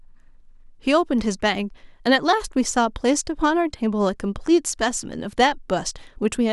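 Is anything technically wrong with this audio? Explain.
No, nothing is technically wrong with this speech recording. Nothing heard in it points to a problem with how it was captured, carried or played back.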